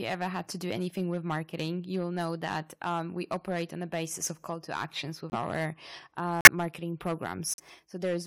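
Speech clip with hard clipping throughout. The level is driven about 9 dB past what the signal path can pass, so a few percent of samples hit the ceiling and are sliced flat. On the waveform the loudest syllables show squared-off tops. On a spectrogram those moments smear energy as vertical haze far above the voice's own harmonics, heard as a harsh fuzz riding every louder stretch of speech. The second fault is corrupt frame muted, three sudden holes where damaged compressed frames were rejected and replaced with silence. The first runs 5.30 to 5.36 s, right after "of call to actions", the second 6.41 to 6.47 s, and the third 7.54 to 7.60 s. Each is roughly 60 ms long, which fits a run of two or three codec frames. The waveform drops abruptly to a flat line, and the spectrogram shows a clean full-band vertical gap with sharp edges, while the speech resumes on time afterward.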